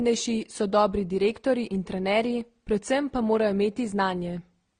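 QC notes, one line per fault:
Throughout, transcoding between lossy codecs: the speech has nothing above about 9.7 kHz, so it sounds dull and boxed in. Several kinds of coding artefact sit on top of one another and are heard together. The likely cause is a chain of lossy encodes, which fits MP3 at around 61 kbit/s, then Opus and AAC-LC at around 32 kbit/s. Each later encode spent bits on earlier damage and kept the lowest cut-off.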